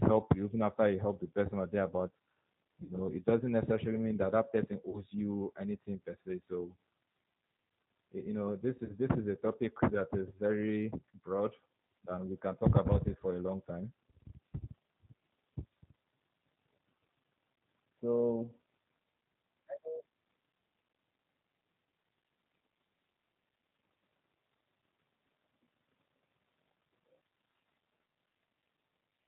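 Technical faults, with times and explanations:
Throughout: G.729 codec. Nothing above 4 kHz is heard, and the speech sounds rough and slightly synthetic. The encoder rebuilds it from a vocal tract filter, a pitch predictor and a few pulses per frame. The damage is plainly audible, which fits an 8 kbit/s G.729A stream.
2.83–2.93 s, 4.89–5.03 s, 8.85–8.93 s: VoIP packet loss concealed by the speech codec. The gaps come before "it doesn't necessarily mean", between "mean that that person" and "you anything per se", and between "you know this" and "this is a". The decoder stretched its last pitch and filter into a fading buzzy tone or coloured noise. About 60 ms was lost at the first gap and 40 ms at the others, which fits three and two 20 ms packets. The speech stays weak briefly afterwards.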